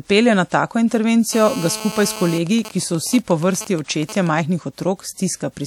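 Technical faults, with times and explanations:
1.33 to 2.38 s, GSM phone buzz: a hard, raspy 217 Hz buzz at about 12 dB below the speech, from a nearby 2G phone in a call whose transmit bursts the audio circuit rectifies. A spectrogram shows a steady comb of harmonics stacked at 217 Hz spacing.
2.47 to 4.39 s, GSM signalling bursts: a nearby 2G phone, with its user silent in the call, sends only short groups of bursts, heard as even ticks with a longer buzz twice a second, around 15 dB below the speech. The waveform shows regular spikes, with wider buzz blocks every half second.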